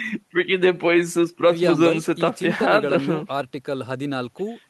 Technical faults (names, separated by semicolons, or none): none